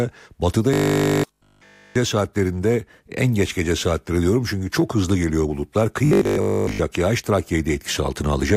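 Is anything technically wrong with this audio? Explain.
Yes, there's robotic sound from repeated short buffers in this speech, from 0.74 to 1.96 s and again from 6.05 to 6.79 s. Both stretches carry a rigid, metallic buzz at 50 Hz that still loosely tracks the talking. The likely cause is audio arriving too late, so playback keeps looping the last chunk, which fits a 20 ms buffer. In the first stretch essentially all of it is repeated. In the second, most of it is.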